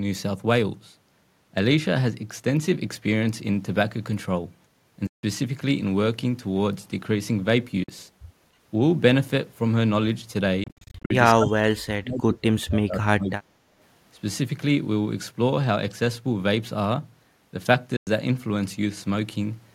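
Speech, with packets that likely failed to reach the headphones in time, a Bluetooth dropout, cutting silences at 5.07 to 5.23 s, 7.84 to 7.89 s, scattered gaps from 10.64 to 11.11 s, and 17.97 to 18.07 s. From 11.36 to 13.59 s the echo canceller likely mistook double talk for echo, and speech suppressed in double talk drops the voice by up to about 40 dB for roughly two seconds.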